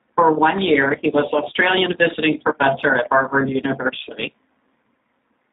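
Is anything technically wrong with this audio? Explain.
Yes. Throughout the clip, the speech has passed through a G.729 codec, and the damage is plainly audible. This low-rate VoIP coder rebuilds each 10 ms frame from a vocal tract filter, a pitch predictor and a handful of pulses, which fits a rate of around 8 kbit/s. Nothing above 4 kHz survives, so the voice is dull and band-limited, and the coarse pulse excitation leaves the speech rough and slightly synthetic.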